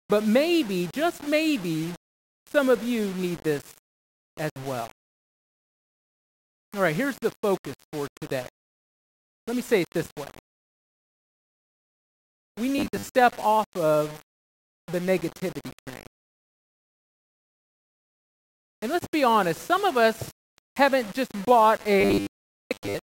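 From the first second the whole clip has a grainy, gritty edge that rides along with the sound, roughest in the quiet stretches. That's low bit depth without dither, likely a reduction to something like 6 bits with plain rounding. The rounding error tracks the signal instead of sitting as a steady hiss, so it comes across as distortion, sitting only about 20 dB under the sound.

At 12.78 s the sound suddenly turns metallic and buzzy until 13.13 s. It's robotic sound from repeated short buffers: the audio keeps restarting the same 10 ms slice, which stamps a rigid 100 Hz buzz on everything, with about half the real material skipped over. The same buzz comes back at 22.01 s and runs right to the end at 23.06 s, heavier this time with most of the audio replaced by repeats. Both likely come from new audio arriving too slowly.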